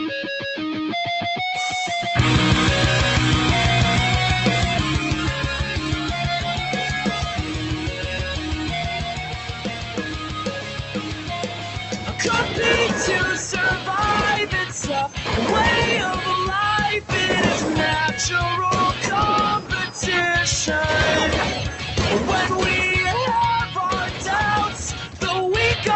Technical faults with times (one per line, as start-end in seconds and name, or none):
0.00-25.96 noise suppressor applied to music or sounds
9.16-12.20 sound cut by the noise suppressor
15.08-15.29 sound cut by the noise suppressor
19.60-19.96 sound cut by the noise suppressor
21.69-21.95 sound cut by the noise suppressor
24.02-24.25 sound cut by the noise suppressor
24.68-25.23 sound cut by the noise suppressor